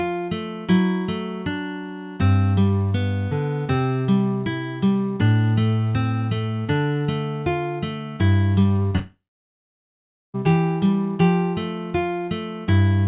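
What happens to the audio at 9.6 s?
At 9.6 s you're right in the middle of a gap that runs from about 8.96 to 10.36 s, and it's most likely a long network dropout. Roughly 1.4 s of audio never arrives, so the receiver stretches the last bit of sound into a short fading buzz, then leaves near-silence for around 1.2 s. When the sound returns, the lost part is simply skipped. Around the gap everything stays band-limited below 4 kHz, which fits a G.711 mu-law call path.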